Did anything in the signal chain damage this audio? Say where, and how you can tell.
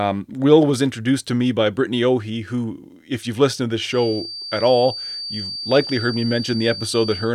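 Yes. From 3.87 s to the end, a steady feedback whistle at 4.6 kHz sits roughly 10 dB under the speech and swells and fades slowly in level. The likely cause is an acoustic loop from loudspeaker back into the microphone, held just at the feedback threshold so one frequency rings without building up.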